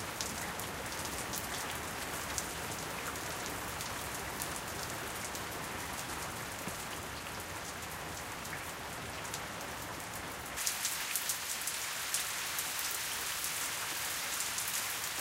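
From 10.57 s to the end, pre-emphasis is left on: the treble boost, which fits a J.17 curve, was never undone, lifting 10 kHz by about 11 dB and leaving the sound thin, bright and sibilant.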